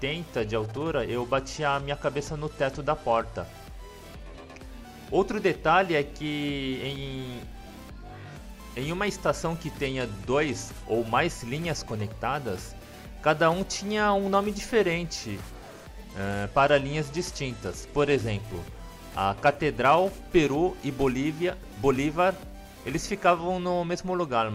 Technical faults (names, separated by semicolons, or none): Bluetooth SBC bit pool drop